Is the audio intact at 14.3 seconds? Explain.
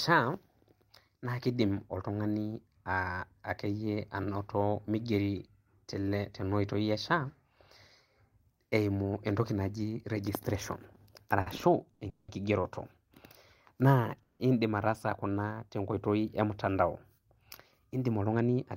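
No. A call audio freeze runs from 14.23 to 14.41 s. Packets were likely held up so the jitter buffer emptied, and the receiver stretched the last sound into a fading buzz or hiss for about 170 ms, ending in a brief silence. Speech then resumes where it stopped, with nothing lost but about 170 ms of added delay.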